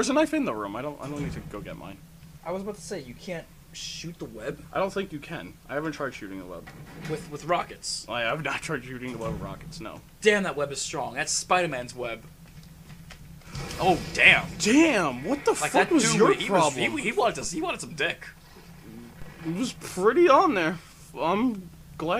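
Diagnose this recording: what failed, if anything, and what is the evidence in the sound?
Two low thumps stand out, at 17.44 s and again at 19.22 s, each a dull knock under the sound, which carries on unaltered through both. They come from a DC step: the waveform's zero line jumps by about -31 dBFS, the kind of shift a converter recalibrating or an offset input being switched in produces. Each offset then drains away through a 5 Hz high-pass, so the offset fades rather than lingering as a lasting shift.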